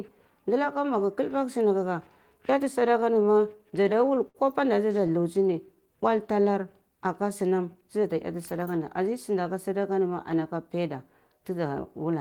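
Between 2.79 and 4.37 s, packets arrived late and the jitter buffer ran dry 14 times, causing repeated stalls (stutter). The receiver bridged each gap by extending the last sound, about 187 ms in all, with gaps up to 62 ms. Nothing drops out, but the speech drags and catches.

From 5.00 to 5.86 s the buffer was running low, so the receiver built up a reserve by repeating single pitch periods. This jitter buffer slow-down adds 61 ms, and the speech plays at 94% speed with unchanged pitch and drawn-out sounds. Within it, from 5.07 to 5.46 s, four more brief stalls occur, none longer than 12 ms.

From 7.82 to 9.08 s the buffer held more audio than its target, so the receiver cut short pieces of pitch periods, about a tenth of a second altogether. This jitter buffer speed-up makes the speech run at 108% speed, quicker but at the same pitch.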